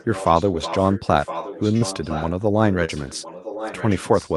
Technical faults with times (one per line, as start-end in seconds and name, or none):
0.00-2.33 echo leak
1.77-1.83 short concealed packet loss
2.73-4.35 echo leak
2.85-2.90 short concealed packet loss